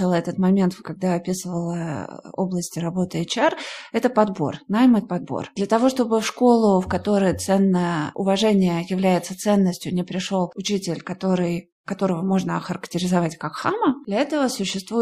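No technical faults can be heard anywhere in the recording. Nothing in the signal chain interrupts or alters the speech at any point.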